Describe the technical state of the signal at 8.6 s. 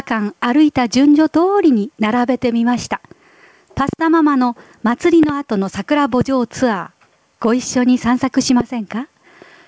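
At 8.61 to 8.63 s there's a loud pop, a single sharp crack standing out around 15 dB above the sound, which carries on right underneath it. It's likely a voltage spike from a plug, switch or static discharge getting into the line.

Gain pumping is also running through this moment. The gain swings about 10 dB, leaving everything squashed. The likely cause is gain set far too high, with a fast limiter constantly clamping it back down.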